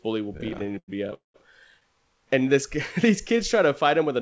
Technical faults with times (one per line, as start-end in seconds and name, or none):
0.38-1.14 repeated stalls (stutter)
1.14-1.36 call audio freeze
3.07-3.69 jitter buffer slow-down